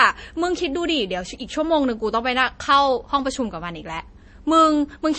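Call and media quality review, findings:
Speech, whole clip: nothing above about 8.3 kHz, watery swirl on sibilants, smeared onsets. Likely MP3 compression at a low bitrate, around 32 kbps, encoder dropping treble and sparse lines.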